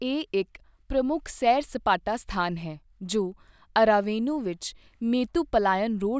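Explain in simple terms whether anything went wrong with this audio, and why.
Nothing went wrong here.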